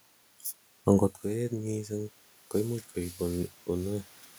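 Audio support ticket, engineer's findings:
Automatic gain rising, 1.29–4.14 s: voice level fell about 14 dB after talker moved back near 1 s; AGC ramps gain up about 8 dB, room noise swelling with it.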